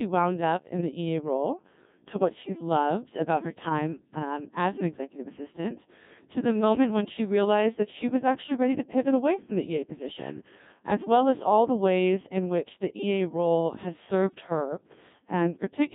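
Throughout, the speech sounds robotic and buzzy, confined to about 150 Hz to 3.7 kHz. This is the Codec 2 vocoder, resynthesising from pitch and envelope, which fits about 1.6 kbit/s.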